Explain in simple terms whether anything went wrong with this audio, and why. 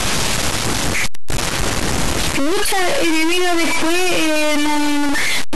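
Something went wrong for the whole clip, from start to finish. The speech carries a harsh, buzzy distortion, and even the pauses fill with loud noise. That points to a stuck bit, likely one fairly high data bit jammed on or off. It pushes many sample values wrong.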